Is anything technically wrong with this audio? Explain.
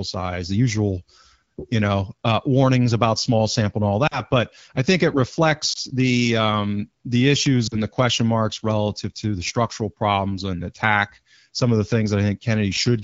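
Yes. Lost AMR speech frames occur at 4.07–4.21 s, 5.73–5.78 s and 7.67–7.77 s. Corrupted frames were discarded, and the AMR-WB decoder repeated the last good pitch and vocal tract settings at falling gain. The single lost frame at 5.73 s sounds like a brief dip or warble, while the two-frame losses at 4.07 s and 7.67 s drop to near silence, and the voice comes back weak or rough for a moment before the speech recovers.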